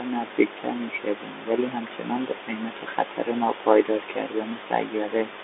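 Speech, carried throughout by a Bluetooth CVSD headset codec: the band is squeezed to roughly 300 Hz to 3.6 kHz, with nothing above 3.8 kHz, giving the thin telephone-headset sound, which fits a 64 kbps one-bit delta stream. Because the step size lags fast, loud changes, s sounds turn scratchy and a granular hiss sits under the speech. On a spectrogram the energy ends in a hard ceiling near 3.8 kHz with an empty low band below 300 Hz; the waveform looks stepped and grainy.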